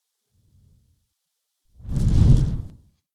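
From start to finish, everything runs fast and sits noticeably high: events pass about 1.38 times quicker than they should, and the whole pitch is lifted by roughly five and a half semitones, so the sound comes across as small and hurried. This is a wrong sample rate fault. The samples are being clocked out faster than they were captured, with no conversion, which fits audio recorded at 32 kHz being played back at 44.1 kHz.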